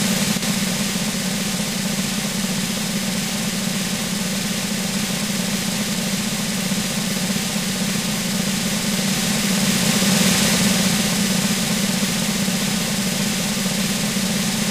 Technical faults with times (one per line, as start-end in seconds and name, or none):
0.37-0.42 one channel drops out